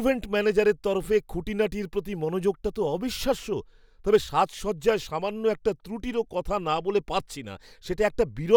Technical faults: none

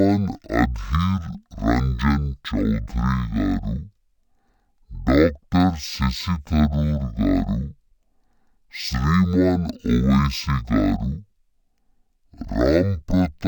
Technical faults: stereo read as mono

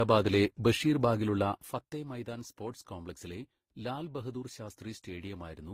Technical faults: transcoding between lossy codecs

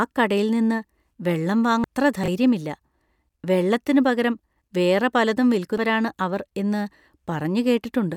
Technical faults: damaged data in a compressed stream; chunks out of order

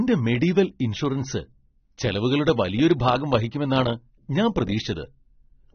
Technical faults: AAC compression

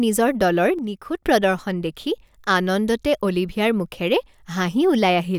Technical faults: one channel drops out

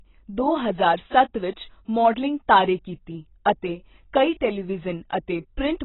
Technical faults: AAC compression

